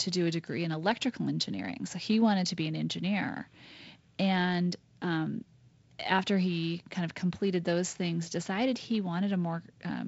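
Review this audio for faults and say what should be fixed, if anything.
Nothing here needs fixing. The speech passes through G.722 wideband telephone coding, with nothing above 7.7 kHz and a light coding grain that fits the 48 kbit/s mode.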